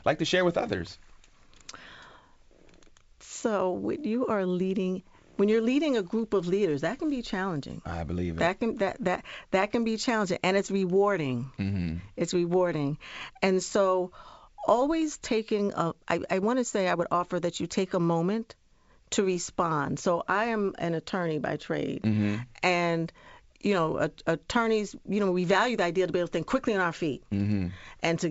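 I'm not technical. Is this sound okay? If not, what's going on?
Yes, nothing stood out on listening to this speech, which has the slightly trimmed top end of a good-quality internet or HD phone call, with nothing much above about 7.7 kHz.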